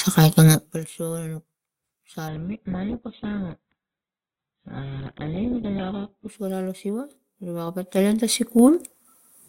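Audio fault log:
0.47–0.81 s and 7.60–9.13 s, zipper noise: the level falls by about 20 dB in the first stretch and rises by about 20 dB in the second. Both moves happen in discrete 2 dB jumps instead of a continuous ramp. Each jump puts a small discontinuity into the waveform, so a fine ticking rides on the sound while the gain moves. It is a fast zip of around 30 steps per second on the way down and a slower tick of around 7 per second on the way up.
2.28–6.28 s, adaptive stream at a lower bitrate: the quality drops abruptly with no gap. Nothing is left above 4.2 kHz, so the treble is gone and the sound turns thin and coded, with codec artefacts. This fits a switch from an Opus stream at about 64 kbit/s to one at about 8 kbit/s while the connection slowed. Full quality snaps back just as suddenly at 6.28 s.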